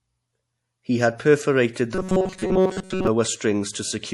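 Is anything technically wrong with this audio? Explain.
Yes, there are two problems here, one running the whole way through and one in the middle of the clip.

Throughout the speech you can hear what's most likely MP3 compression, and fairly heavy at that. The encoder was short of bits, so it kept dropping weaker frequency detail in and out from frame to frame. That gives a watery, swirly quality, and s sounds go chirpy and metallic. It sounds like a low bitrate, roughly in the 48 kbps range.

From about 1.95 to 3.07 s the speech turns into a robotic sound from repeated short buffers. It's a rigid, metallic buzz at 188 Hz that still loosely follows the speech. The cause is likely new audio arriving too slowly, so the playback loops the last little chunk to fill the gaps. A 188 Hz buzz points to a chunk of about 5.3 ms. Most of the real audio in that stretch gets skipped and replaced by repeats.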